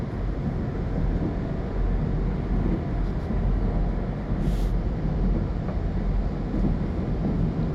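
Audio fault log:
7.17–7.25 s, DAB burbling: a short burst of burbling where bit errors at a rate near a tenth of a percent slipped past error correction. Short noise blips hit single sub-bands across what fits about six audio frames, showing as flickering rectangular band blocks on a spectrogram.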